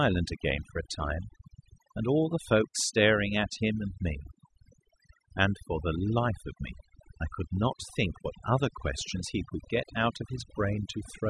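A speech recording with overdone noise removal throughout: the background drops and breaks up into twinkling specks. A spectrogram shows scattered isolated time-frequency dots in gaps and ragged, holed voice harmonics where quiet bands were gated out.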